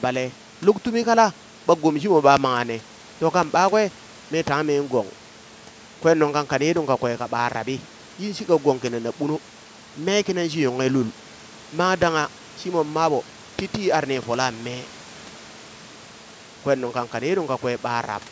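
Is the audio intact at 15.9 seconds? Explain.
Yes, the speech at 15.9 seconds is intact, with nothing beyond the ordinary call microphone processing, whose high-pass filter trims only the deepest bass.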